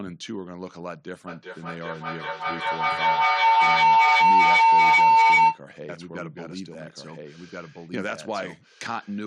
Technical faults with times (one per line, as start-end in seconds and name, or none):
1.27-5.66 feedback howl
5.89-9.27 doubled audio track